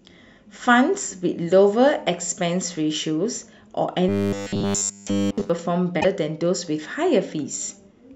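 From 4.09 s to 5.50 s the speech turns into a rigid, metallic buzz locked at 100 Hz, the signature of robotic sound from repeated short buffers. A 100 Hz buzz fits a 10 ms chunk being played over and over, with essentially all of this stretch built from repeats while the real audio is skipped. The likely cause is new audio arriving too seldom for playback. The buzz still roughly tracks the syllables. That fixed buzz rate separates it from codec warble, which smears the sound without imposing one steady tone.

At about 5.97 s to 6.05 s there is a short glitch of roughly 80 ms, typical of damaged data in a compressed stream. Corrupted bytes made the decoder misread its frames and lose sync, so it produced garbled output while searching for the next valid frame header.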